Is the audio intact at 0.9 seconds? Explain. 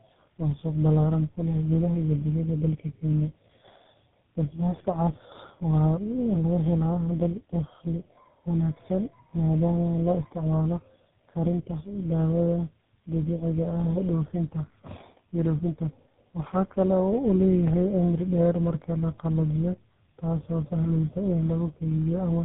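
No. Tandem speech coding runs throughout, so it is present at 0.9 s. Three speech coders in a row (AMR-NB then GSM full rate twice) leave rough, warbly, muffled speech with nothing above 3.8 kHz.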